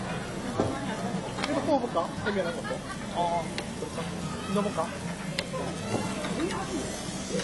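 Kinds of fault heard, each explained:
AAC compression: the sound stops dead above 11.5 kHz and has an obvious smeared, fizzy warble, likely a bit-starved AAC-LC encode, which fits 32 kbps.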